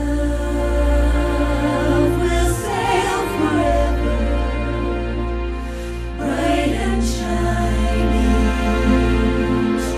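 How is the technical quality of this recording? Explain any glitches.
The technical quality is compromised by audible coding damage that runs through the whole recording. Throughout, the sound is dull and carries a gurgling, granular roughness, most likely from MP2 compression at a low rate, consistent with roughly 80 kbps. Layer II divides the signal into 32 equal sub-bands and rations bits among them. Starved upper bands drop out and flicker back, while surviving bands are coarsely quantised. Unlike a plain low-pass filter, the top end here keeps switching on and off, and the graininess sits inside the remaining bands.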